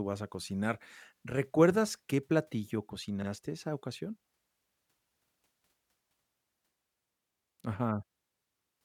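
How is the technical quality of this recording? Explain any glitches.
There's one glitch. At 5.28 s you get overlapping chunks: the speech was handled in 2 s blocks, and one started 50 ms early, so that slice plays twice as a quick stutter.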